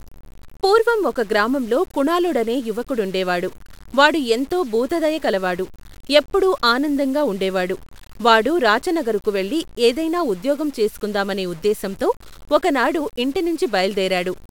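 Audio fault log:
throughout: low bit depth without dither. The speech carries a grainy distortion that shifts with the sound, roughly 30 dB below it, and quiet tails sputter or drop out. The likely cause is truncation to 7 bits without dither, so the error follows the signal.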